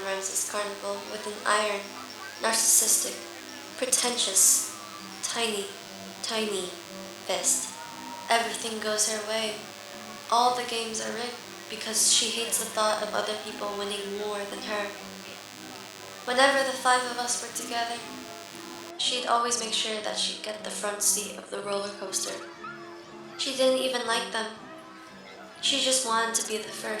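A steady, thin buzz runs under the sound from the start until 18.9 s: DECT cordless phone buzz. A DECT handset or base station close to the recording chain transmits a short radio burst every 10 ms, and the audio circuitry rectifies it into a 100 Hz pulse train rich in harmonics, which gives the buzz its hard, reedy edge. It sits roughly 15 dB below the wanted signal.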